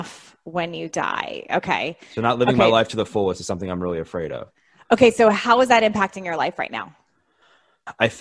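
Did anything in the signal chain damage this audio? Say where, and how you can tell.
No, nothing in the signal chain damaged this audio.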